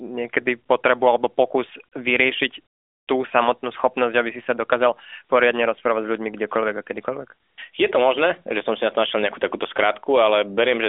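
No technical faults can be heard anywhere in the speech. It comes through an AMR narrowband mobile codec working as intended, with a telephone-style band of roughly 300 Hz to 3.6 kHz, nothing above about 3.7 kHz, and only light coding at what sounds like the 12.2 kbps mode.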